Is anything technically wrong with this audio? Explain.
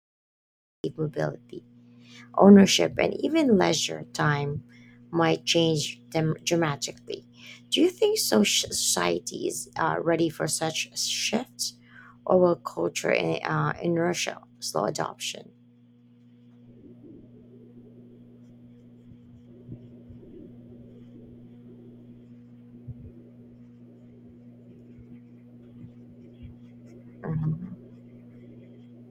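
Yes, the speech begins with a cut-off start. From 0.0 to 0.84 s there is only digital silence, and at 0.84 s the audio switches on abruptly in the middle of a sound rather than rising into it. The recording or stream began capturing after the talker had already started, so the opening of that sound was never recorded. Its natural attack is missing, and the first syllable arrives abruptly, sounding clipped off at the front.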